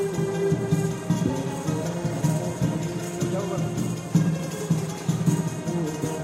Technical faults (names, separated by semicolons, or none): crude rate conversion